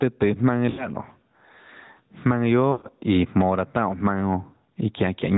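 The gain swings by roughly 15 dB, pulled down under loud sounds, squashing the dynamics. This gain pumping is likely from input gain set too high, with a fast limiter clamping it. Throughout, the speech sounds band-limited, buzzy and plainly synthetic, with nothing above 4 kHz: the AMR narrowband mobile codec, at a level of damage that fits a mid-range rate around 10 kbps. From 0.70 to 0.90 s the sound smears and sags briefly. This is lost AMR speech frames, with the decoder repeating its last good settings at falling gain. From 2.72 to 2.87 s a longer run of lost frames drags the sound out and fades it toward silence before it returns weak or rough for a moment.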